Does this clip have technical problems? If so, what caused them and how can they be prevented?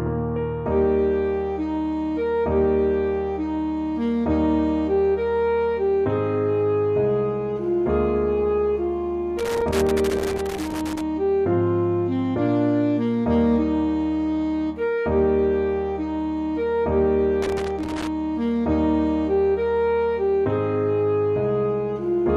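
Yes: irregular scratchy crackle bursts at 9.39–11.01 s and 17.42–18.07 s, loose connector crackle from a worn or dirty contact intermittently breaking the signal. Cleaning or replacing connectors and securing cables prevents it.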